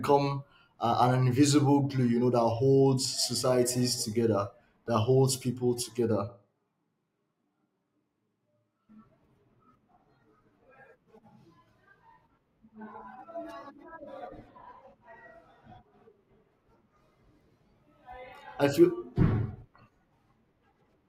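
A speech recording in which, from 6.30 to 8.88 s, just after "that holds people together", the voice abruptly turns roomy and hollow, thinner in the bass, about 5 dB quieter, with room noise rising to roughly 25 dB below the speech, then snaps back. The likely cause is a switch to a distant microphone, picking up the room and losing close-miking proximity.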